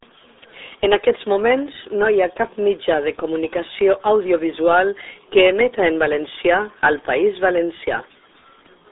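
From start to end, the speech carries the RealAudio 14.4 codec's mark: squeezed into roughly 300 Hz to 3.7 kHz, muffled and gargly, which fits an 8 kbit/s dial-up stream.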